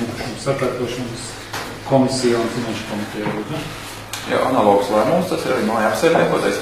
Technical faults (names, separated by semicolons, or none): adaptive stream at a lower bitrate